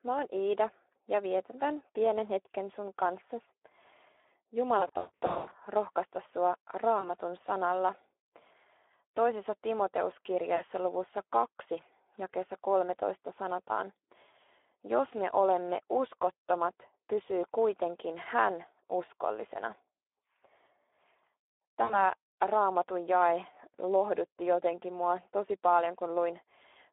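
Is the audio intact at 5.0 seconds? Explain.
No. At 5.0 s the speech is broken up by VoIP packet loss concealed by the speech codec, running from about 4.79 to 5.55 s. Stretches of it smear into a buzzy, droning tone or a coloured hiss that dies away, and the sound stays weak and distorted briefly after it resumes. Roughly 460 ms of audio went missing in gaps scattered over 720 ms, the longest about 160 ms. The decoder filled each gap by repeating its last pitch and spectral shape at falling gain, and because every frame builds on the previous one, recovery lags behind the returning data.

Underneath, as everywhere in the clip, the Speex codec damage is plainly audible. The speech sounds hoarse and noisy, and is confined to a telephone-like band of 300 Hz to 3.6 kHz. This fits a low-bitrate setting around 11 kbps, where too few bits are left to code the excitation cleanly.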